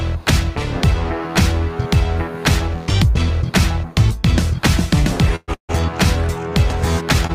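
At 5.36 to 5.50 s and 5.54 to 5.71 s, two call audio freezes occur. The last sound fades into a buzz or hiss, then silence, about 30 ms and 110 ms. Delayed packets likely emptied the jitter buffer. Audio resumes where it stopped, nothing lost.

At 7.27 to 7.31 s, a short stall from a late packet holds the sound about 24 ms with a slight buzz or dip, then continues.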